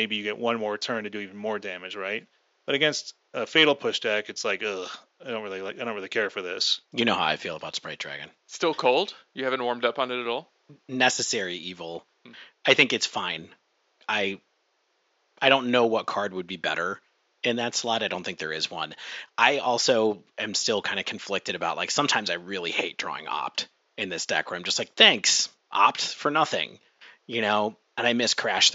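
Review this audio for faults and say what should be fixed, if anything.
No faults turn up in this audio, so nothing needs to be fixed.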